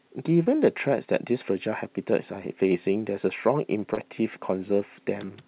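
Short concealed packet loss at 0.44 to 0.48 s and 3.94 to 3.99 s in this speech clip: about 20 ms of audio went missing each time, and the receiver bridged the gap by extending the preceding sound before blending back, leaving a brief smear, all over a narrowband call path with nothing above 4 kHz.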